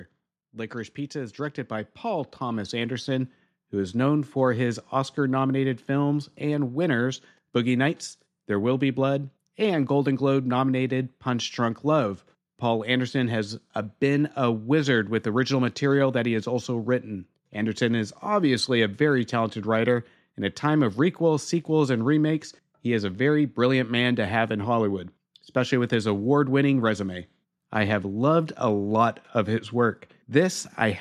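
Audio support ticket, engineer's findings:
Speech and background swell together, about 10 dB louder, 0.38 to 5.21 s. Automatic gain rising: AGC judged input too quiet, ramped gain up gradually.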